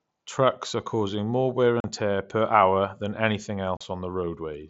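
Voice packets between headset and phone dropped without concealment, an unconcealed Bluetooth headset packet loss, leaving abrupt silent holes of about 40 ms, roughly five mSBC frames: at 1.80 to 1.85 s, after "are causing more wear", and at 3.77 to 3.81 s, after "per hour than anything".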